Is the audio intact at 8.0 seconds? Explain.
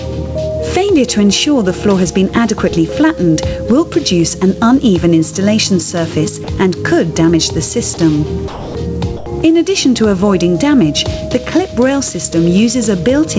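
No. From 7.94 to 7.97 s, about 30 ms of sound gives way to steady comfort noise. The likely cause is the sender's voice detector mistaking it for background. The level also pumps throughout, swinging around 10 dB. This is gain pumping, likely from an overdriven input hitting a fast limiter.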